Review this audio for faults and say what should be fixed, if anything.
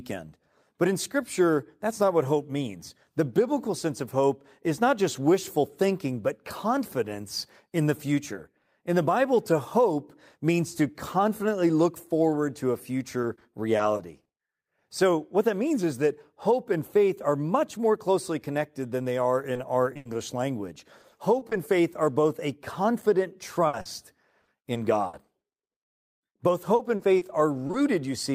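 Choppy, robotic speech appears at 13.21–14.39 s, 21.01–21.53 s, 23.67–26.09 s and 26.75–27.75 s. This is repeated packet loss. Holes of up to 60 ms recur so often that roughly a sixth of each stretch is patched by continuing the preceding sound. Adding forward error correction and a larger adaptive jitter buffer, or fixing the congested network path, should prevent it.

Brief smears or wobbles occur at 19.53–19.57 s and 19.93–19.97 s. These are short concealed packet losses: about 20 ms each never arrived, and the receiver bridged the gap by extending the last sound. Redundant or FEC-protected packets would let the receiver rebuild these small gaps rather than guess them.

Immediately after the second wobble, at 19.97–20.07 s, a burst of packet loss produces a held, fading buzz or hiss. About 80 ms of audio is missing and was replaced by a decaying continuation of the previous sound. Stabilising the link, for example with QoS prioritisation for the audio stream or a wired connection, should prevent bursts like this one.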